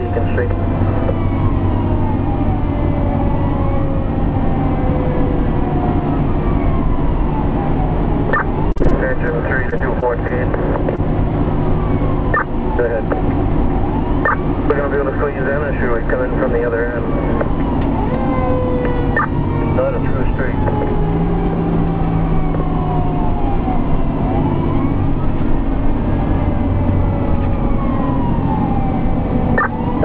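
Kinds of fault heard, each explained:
Repeated packet loss (robotic sound): from 8.72 to 9.30 s and again from 9.70 to 10.32 s, the audio keeps dropping out in quick succession, five gaps in the first stretch and four in the second, none longer than 37 ms. The receiver bridges each hole by extending the preceding sound, so roughly a sixth of the first stretch and an eighth of the second is synthesized. Those patches alternate with the real signal, and the joins give the audio a choppy, mechanical edge.
Short concealed packet loss: at 10.96 to 11.00 s, a single isolated gap of about 20 ms occurs just after the robotic stretches. The decoder carries the last sound forward to fill the hole and then blends back into the real signal. The result is a brief smear or wobble rather than a silence. A short transient falling inside that window can disappear, and the call audio is band-limited, with nothing above 8 kHz.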